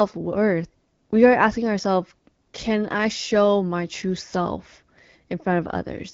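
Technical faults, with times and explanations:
No technical faults can be heard in this speech. It carries the band-limited sound of AMR wideband (HD Voice) coding at 12.65 kbit/s, which keeps speech clear with only light codec colouring.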